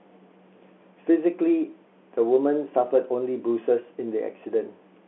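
Nothing goes wrong anywhere in this speech recording, so there's no fault to point to at any moment.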